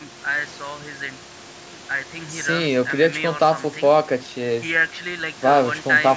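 The speech carries no technical faults, with only the room's own background noise sitting about 20 dB beneath it and the call's microphone processing leaving nothing above 8 kHz, as expected for that path.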